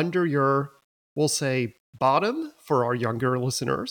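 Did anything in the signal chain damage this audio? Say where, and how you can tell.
Yes. Grainy distortion runs throughout the speech, tracking the signal and roughest on quiet decays, around 40 dB below the level. This is low bit depth without dither, likely from a sample-format conversion rounding to about 9 bits, so the error follows the waveform.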